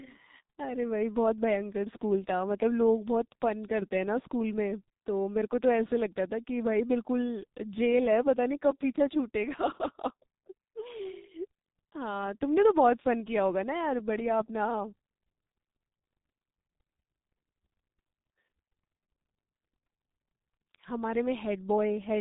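G.723.1 codec damage runs through the whole of this speech clip, from start to finish, and it is heavy. Nothing is passed above 3.8 kHz, so the sound is muffled and boxy, and the thin, hoarse texture fits a bitrate of about 6.3 kbit/s. Working in 30 ms frames, the codec rebuilds the voice from a coarse model that is refreshed too slowly to track quick changes, which smears consonants into one another.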